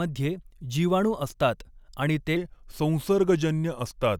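Right after "जीवाणू असतात आणि", at 2.36 s, the speech drops into a section at the wrong speed that runs to the end at 4.20 s. Playback slows to 0.885 times the original rate, so pitch and tempo fall together by roughly two semitones, and the voice turns deeper and a bit draggy. The shift is abrupt, and the likely cause is that stretch being run against the wrong clock during editing or playback.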